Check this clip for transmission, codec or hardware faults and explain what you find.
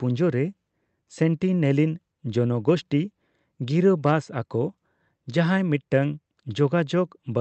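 No transmission or hardware faults.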